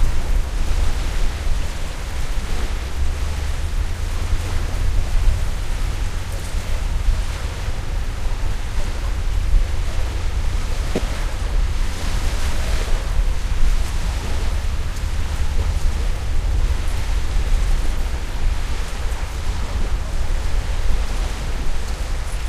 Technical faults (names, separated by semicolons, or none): corrupt frame decoded